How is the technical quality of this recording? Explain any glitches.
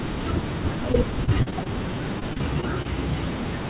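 Technical quality takes a hit from a couple of network glitches layered on a narrowband call signal. Nothing comes through above 4 kHz, which points to a G.711 mu-law phone-style path, so the speech has that boxy telephone sound throughout.

The first repeated packet loss (robotic sound) runs from about 0.92 to 1.67 s. Half a dozen short holes turn up, the longest around 39 ms, and each one gets patched by stretching out the sound that came just before it. Roughly 16% of that stretch is patched-in sound, and with holes coming that close together the speech goes choppy and takes on a robotic edge.

Overlapping that, a jitter buffer slow-down runs from about 1.34 to 2.02 s. The receiver's buffer was running low or had just raised its target delay, so it repeated tiny slices of the signal to build up a reserve. Playback drops to about 93% speed and adds roughly 52 ms, which makes the speech sound a bit dragged out while the pitch stays put. 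It overlaps the end of the first loss stretch.

The second repeated packet loss stretch runs from about 2.20 to 2.86 s. It works the same way as the first, with around five gaps, the longest about 25 ms, and roughly 14% of the span concealed. It has the same stuttery, robotic choppiness.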